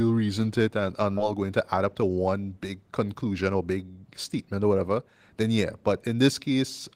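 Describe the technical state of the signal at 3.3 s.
At 3.3 s the receiver is in a jitter buffer speed-up from 3.13 to 3.78 s, trimming about a tenth of a second of pitch periods. Speech runs 114% fast at unchanged pitch, sounding hurried just before "statement or whatever".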